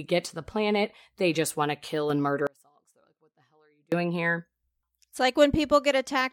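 At 2.47 s, just after "want to kill and", the speech drops out abruptly and stays gone until 3.92 s, a gap of about 1.45 s. This is an audio dropout to a faint residue: the signal collapses to a faint leak around 35 dB below its normal level rather than to silence. The likely cause is a break upstream of a path that stayed live, so the gap carries only that weak trace. Both edges are hard cuts, not a pause or fade.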